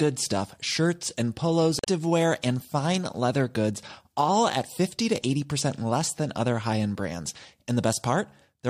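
Damaged data in a compressed stream appears from 1.79 to 1.87 s in this speech, right after "stuff shirts and polos" and before "and fine leather goods". For about 75 ms the decoder is handed corrupted frames that it cannot parse, so it loses sync and hunts for the next valid frame header. That brief stretch of misread data comes out as a chirp, squawk, click or short hole, after which normal decoding resumes.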